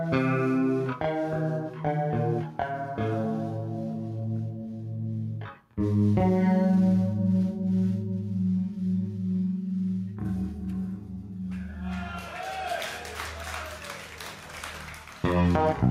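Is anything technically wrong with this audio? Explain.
No, no technical faults detected.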